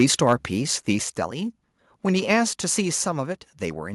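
From 0.00 to 0.32 s the speech has a harsh, crackling edge on its loudest parts, peaks driven about 3 dB past the converter's limit with a small share of samples flattened. That is microphone overload, most likely an input gain set too high so the converter runs out of range and squares off the waveform tops. Unlike codec distortion, which smears the whole sound, this grit appears only on the peaks and leaves quieter moments clean.

At 1.02 s the microphone volume is stepped down. Voice and background drop together by about 4 dB in a single instant, likely the call software cutting the device's input gain after the earlier overload. What separates this from automatic gain control is the abruptness: there is no gradual ride or fade, just one step to a new, steady level.

Another brief burst of microphone overload comes at 2.30 to 2.33 s, about 2 dB over, with the same peak-only crackle and a small fraction of samples cut flat.

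At 3.12 s the microphone volume steps down again by about 4 dB, likely the software reacting to that second overload. The speech and the room sound fall together, instantly, with no ramp.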